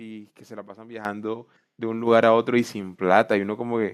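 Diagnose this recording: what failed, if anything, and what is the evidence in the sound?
The call software's automatic gain control judged the microphone too quiet and raised the device's input volume in discrete steps. This is a call-processing fault: microphone volume stepped up. The speech and the background noise jump in level together, by about 9 dB at 1.05 s and by a further 4 dB or so at 2.07 s. Because the gain change hits the input at once rather than ramping, each step is an abrupt lift in level.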